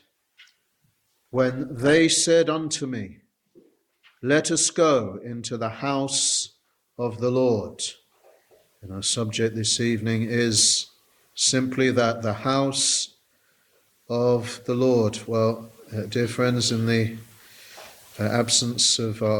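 From 0 to 2.0 s the audio is an adaptive stream starting at a low bitrate. Treble is absent and codec artefacts are stronger, pointing to a 16 kbit/s Opus version, before a sudden, gapless step up to roughly 64 kbit/s. On a spectrogram, a low upper band edge abruptly rises.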